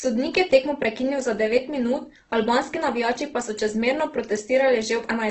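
Throughout, the speech sounds grainy, rough and noisy, with nothing above 8.1 kHz, likely from heavy Opus compression at a rate fitting about 12 kbps.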